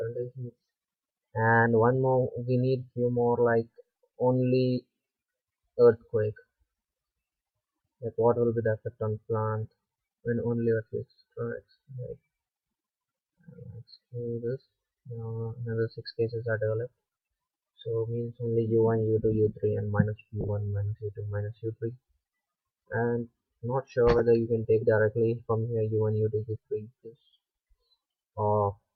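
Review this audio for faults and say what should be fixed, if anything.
Lost LE Audio frames occur twice. From 20.41 to 20.49 s, about 40 ms of audio drops out in several short gaps scattered over 80 ms, the longest around 20 ms. A single 10 ms gap falls at 24.19 s. During each gap, the LC3 decoder conceals the loss by repeating the last good spectrum with randomised signs, so tonal content smears briefly into a noisy burst. The gaps are short enough that the fade-out toward silence never fully develops. The light, steady coding from the lossy compression continues through these points, and the glitches stand apart from it. To prevent recurrence, improve the Bluetooth link margin by shortening the distance, reducing 2.4 GHz interference, or raising the retransmission count, so that frames arrive before their playback deadline.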